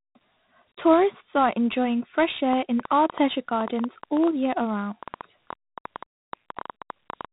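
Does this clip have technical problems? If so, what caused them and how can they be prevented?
Yes. Throughout the speech a gritty hiss rides on every loud syllable, sharp onsets sound roughened, and nothing is heard above 3.9 kHz. This is heavy 4-bit ADPCM compression, consistent with a 32 kbps stream: each sample is coded as a coarse step from a prediction, producing level-tracking noise and distortion where the step size lags fast attacks. Prevent it by recording and storing in an uncompressed or higher-quality format instead of 4-bit ADPCM.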